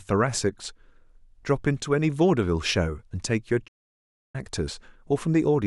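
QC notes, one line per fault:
3.67 to 4.36 s, playback stall. The speech cuts off in mid-flow and the output falls silent for about 0.66 s. The sound simply stops, then resumes. This likely happened because the player ran out of buffered data or its playback thread was held up, so it had nothing to send to the output until it recovered. The gap lands in the middle of continuous speech, so it reads as a clear break.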